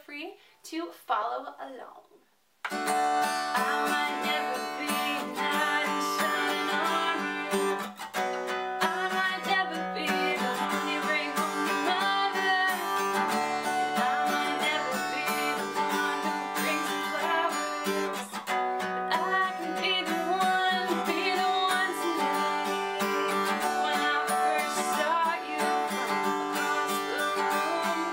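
No technical faults can be heard anywhere in this audio.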